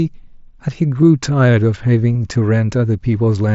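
A nearly hidden blip at 1.02 s, then a brief buzzy held tone from 2.13 to 2.15 s that warbles as the sound resumes. This is concealed Bluetooth headset packet loss: missing packets were filled by repeating the best-matching stretch of recent waveform.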